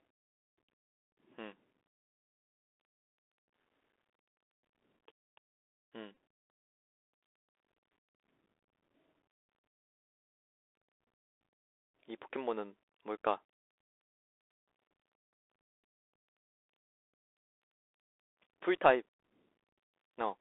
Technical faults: Bluetooth CVSD headset codec; Bluetooth headset packet repeated

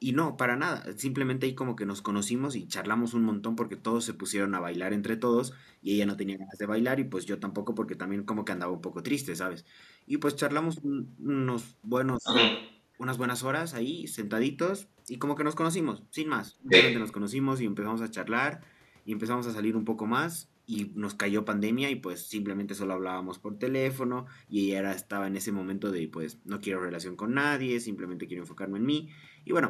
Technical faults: speech suppressed in double talk; other side's voice leaking through

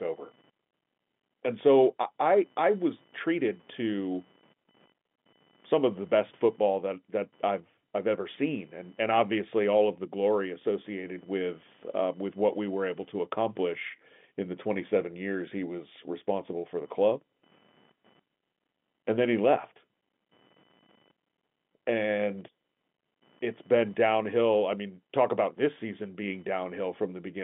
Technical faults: computer activity noise

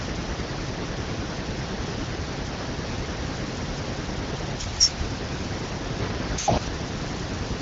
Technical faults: none

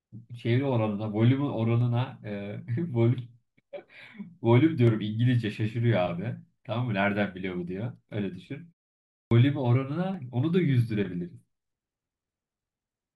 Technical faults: dropped samples; clipped start after a pause

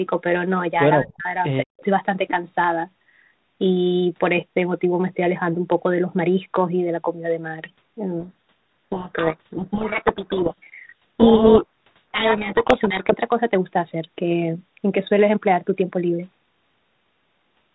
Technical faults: speech suppressed in double talk; echo leak; codec payload misread

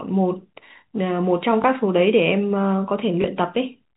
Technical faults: packet loss with last packet repeated

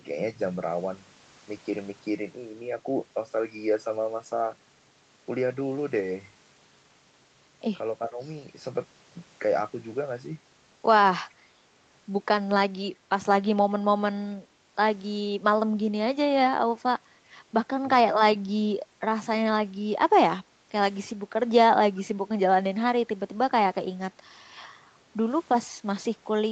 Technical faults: speech suppressed in double talk; background gated by the echo canceller

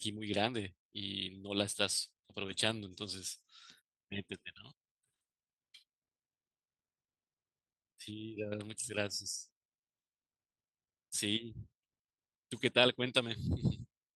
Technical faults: clock drift between sender and receiver; repeated timing corrections

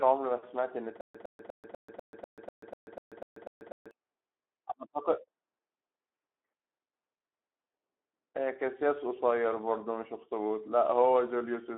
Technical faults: Speex codec; stutter with silent gaps

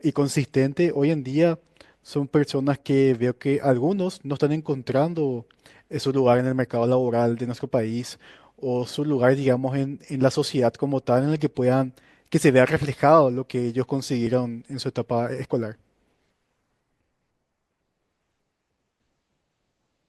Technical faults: overlap between stream segments

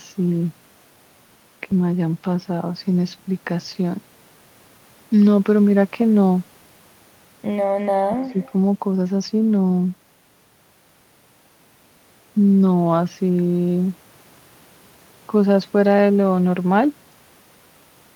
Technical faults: phantom power thump; speech suppressed in double talk; echo leak

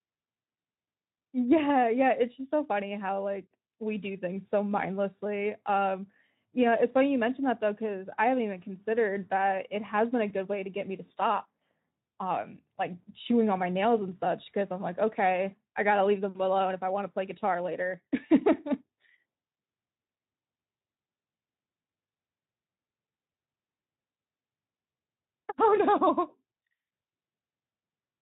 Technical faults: none

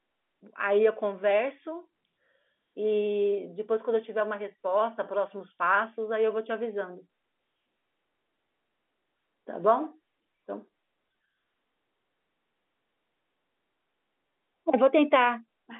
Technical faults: none

